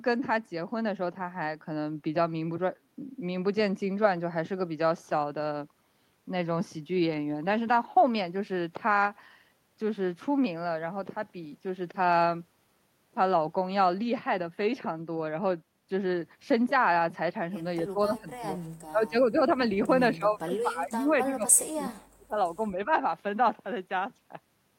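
From 17.84 to 18.48 s and again from 18.9 to 19.49 s, the speech dips by roughly 20 dB in broken patches, and a longer, deeper cut follows from 20.17 to 22.36 s, dropping around 35 dB for about two seconds. This is speech suppressed in double talk, most likely an echo canceller that could not tell the near talker from loudspeaker echo while both sides spoke, so it pulled the level down on both.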